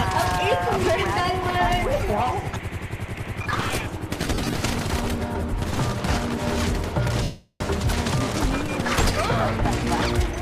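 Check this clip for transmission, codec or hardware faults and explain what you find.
Two dropouts from lost LE Audio frames stand out. The light lossy compression across the clip is also present.

Lost LE Audio frames occur at 4.20 to 4.53 s and again at 7.23 to 7.61 s. When frames go missing over the Bluetooth link, the LC3 decoder fills the gap by repeating the last spectrum with randomised signs, then fades it. In the first event, about 190 ms of audio is lost in short bursts scattered over 330 ms, none longer than roughly 40 ms. Tones turn into a noisy smear. The second is a continuous 375 ms gap, where the sound smears into noise and sinks away toward silence.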